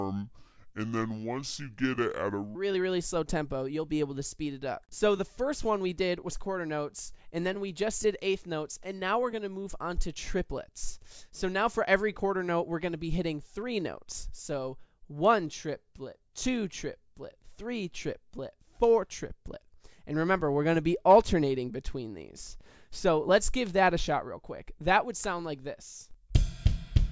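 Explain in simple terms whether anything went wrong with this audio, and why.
For the first 2.55 seconds, the sound plays slow and deep, at about two-thirds normal speed and roughly seven semitones low. This is a wrong sample rate: the sound was played back slower than it was recorded, which fits 24 kHz audio played at 16 kHz.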